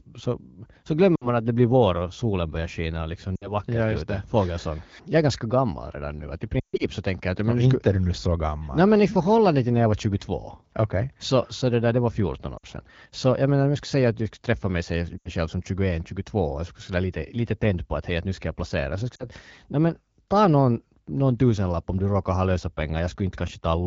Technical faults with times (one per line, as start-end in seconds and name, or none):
1.15-1.28 lost AMR speech frames
3.36-3.54 lost AMR speech frames
6.59-6.84 lost AMR speech frames
12.57-12.66 lost AMR speech frames
15.17-15.30 lost AMR speech frames
19.16-19.27 lost AMR speech frames